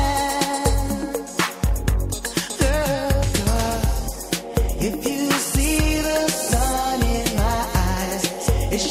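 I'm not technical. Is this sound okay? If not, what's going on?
Yes, this sound is okay, and nothing is going on that needs fixing.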